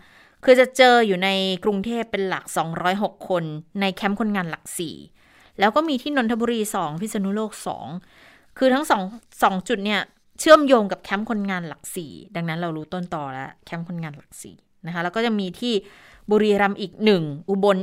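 A speech recording with no technical faults heard.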